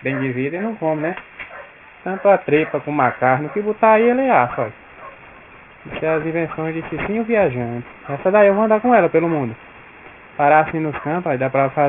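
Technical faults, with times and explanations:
Throughout, aliasing: energy stops abruptly at 3 kHz, which fits a drop to a 6 kHz rate without anti-alias filtering, so higher content folds back as unrelated tones about 20 dB down, sounding gritty and metallic; a spectrogram shows mirrored streaks crowding a hard 3 kHz ceiling.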